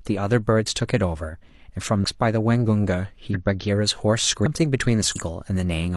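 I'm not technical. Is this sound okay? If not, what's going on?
No. The speech jumps forward four times, at about 2.0, 3.3, 4.42 and 5.11 seconds. Each time a piece simply goes missing, roughly 0.4 of a second, a fifth of a second, a full second and half a second. This is compressed frames skipped: the file stores audio in small chunks, and some chunks were lost or rejected as damaged, so playback leaps ahead.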